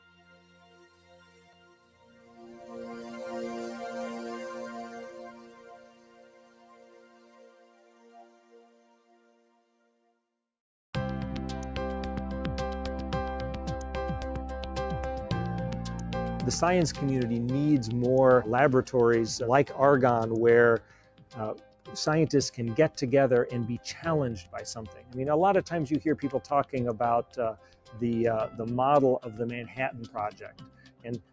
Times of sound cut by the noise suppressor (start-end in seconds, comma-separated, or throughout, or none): 0.00-3.13, 4.84-10.20, 20.79-21.89, 24.88-25.15, 26.41-26.73, 27.23-28.01, 29.67-31.32